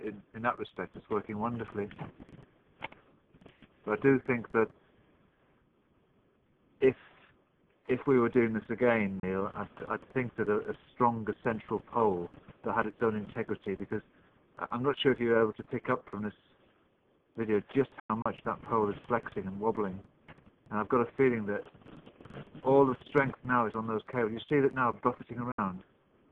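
Digital broadcast dropouts cut the sound at 9.20 s, 18.00 to 18.26 s, and 25.52 to 25.59 s. The receiver muted on bad frames, fading out in 3 ms. The holes last 32 ms, then 128 ms scattered in two gaps, then 64 ms.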